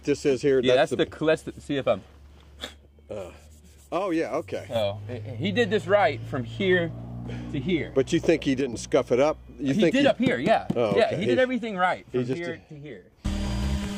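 One channel likely drops out from 2.65 to 4.76 s, 8.60 to 8.73 s and 12.33 to 13.12 s, halving the mono sum so the level falls abruptly by about 6 dB.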